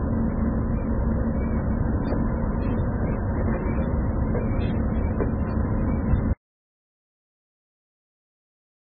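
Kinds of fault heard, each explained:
MP3 compression: Nothing reaches above 4.7 kHz, and the sound is watery and swirling throughout. This heavy damage likely comes from a very low bitrate near 16 kbps.
Audio dropout to silence: At 6.33 s the sound cuts off into silence with no room tone. It stays silent to the end, likely from lost input.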